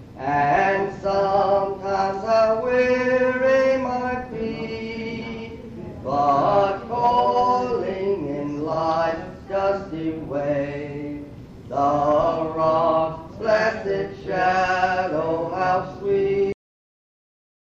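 At about 16.52 s the audio just stops dead, a classic cut-off end. Whatever's sounding at that moment doesn't get to finish or ring out; it's chopped mid-sound and falls straight into digital silence that runs to the end of the file, roughly the last 1.3 s. What's happened is that the final buffers never got written out, so there's no natural decay at all, just an abrupt wall where the sound should have trailed off.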